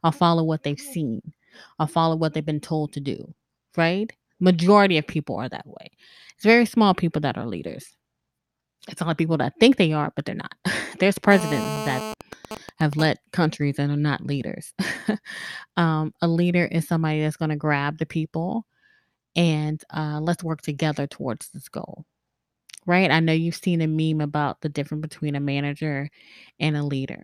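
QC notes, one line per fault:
11.31–12.14 s, GSM phone buzz: A 2G handset on an active call is transmitting nearby, and the audio circuitry rectifies its radio bursts, arriving at about 217 per second. The result is a harsh, raspy buzz at about 217 Hz, rich in harmonics, sitting about 7 dB below the speech.
12.21–13.05 s, GSM signalling bursts: A nearby 2G handset sends only sparse groups of bursts, as a phone does when its user stops talking mid-call, and these are rectified too. They produce even ticks with a longer 217 Hz buzz twice a second, roughly 10 dB under the speech.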